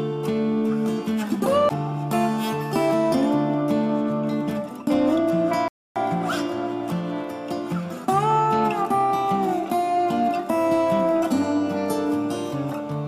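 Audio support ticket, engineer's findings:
Playback stall, 5.68 to 5.96 s: sound cuts dead for 277 ms, flat-line waveform, blank spectrogram column. Likely player buffer starved or thread blocked; output resumes afterwards.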